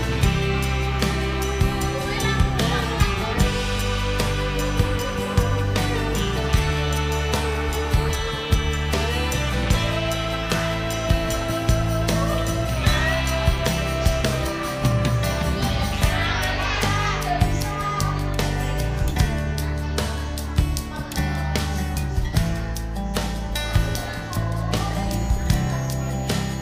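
A switching supply whistle from 25.14 s to the end: a power supply running in an audible burst mode or beating with another leaks a thin tone drifting between 6.5 and 6.8 kHz, roughly 25 dB below the signal.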